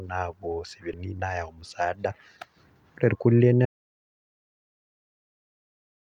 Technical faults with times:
0.93-0.95 skip ahead
1.03-3.28 jitter buffer speed-up
3.65-6.18 audio dropout to silence

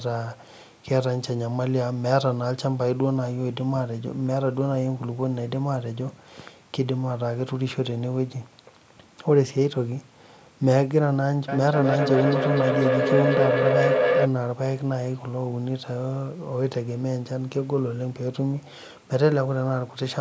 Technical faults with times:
11.48-14.34 feedback howl

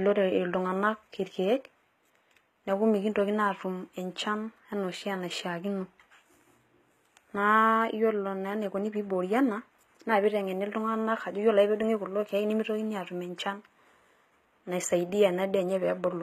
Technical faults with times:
0.00-16.23 HE-AAC compression

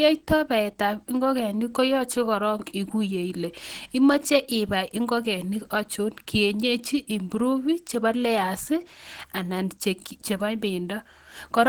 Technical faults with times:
0.00-11.69 Opus compression

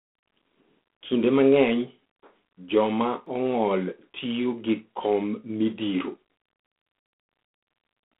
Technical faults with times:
0.00-8.19 G.726 ADPCM
3.26 dropped buffer (overrun)

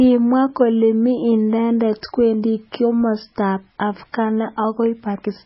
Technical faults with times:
0.00-5.45 MP3 compression

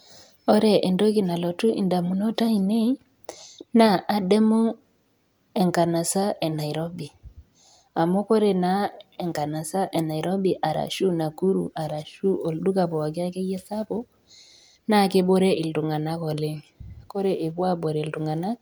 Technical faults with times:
none

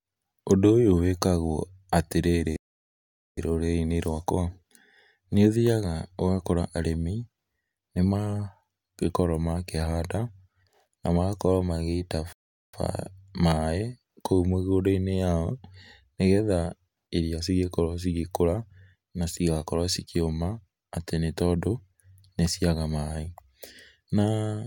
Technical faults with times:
2.56-3.37 playback stall
12.33-12.74 playback stall

